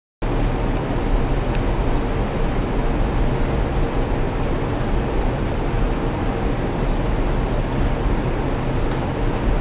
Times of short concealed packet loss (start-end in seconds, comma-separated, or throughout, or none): none